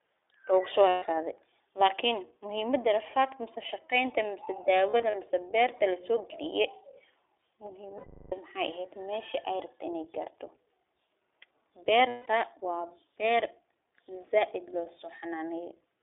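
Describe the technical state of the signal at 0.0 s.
At 0.0 s the speech already sounds boxed-in and plainly rough and synthetic, with nothing audible above 3.6 kHz or below 300 Hz. This is iLBC codec damage, present throughout. Each 20 ms frame is coded independently, which fits a 15.2 kbps narrowband stream.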